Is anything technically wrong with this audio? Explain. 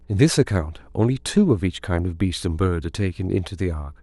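Yes. Throughout, mains hum: a ground loop or nearby transformer is leaking the 60 Hz power line into the signal, leaving a steady low drone roughly 30 dB beneath the speech.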